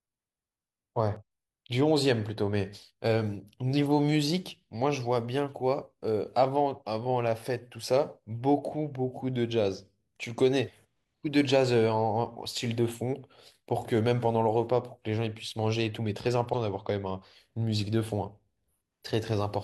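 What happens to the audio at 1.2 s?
From 1.16 to 1.22 s the speech breaks into a short, garbled blip caused by damaged data in the compressed stream. Corrupted bytes make the decoder misread its frames and lose sync before it locks onto a valid header.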